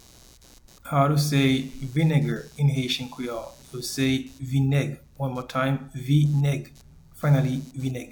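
A faint buzzy chirping runs under the audio for its whole length, pulsing around 150 times a second and sitting roughly 30 dB below the wanted sound. It is computer activity noise. Shifting load in the host machine disturbs the ground the audio circuit shares with it, and that current ripple is picked up as a rasping pulse train that tracks the computer's workload, not anything in the recorded sound.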